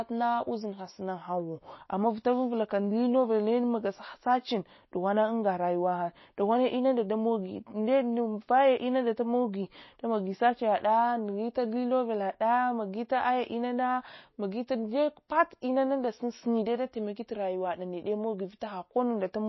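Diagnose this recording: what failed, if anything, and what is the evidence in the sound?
Throughout, the speech sounds watery and swirly, s sounds turn metallic, and nothing remains above 5.8 kHz. This points to the codec stage, likely MP3 compression at a bitrate near 24 kbps, cutting the treble and switching weak frequency lines on and off between frames.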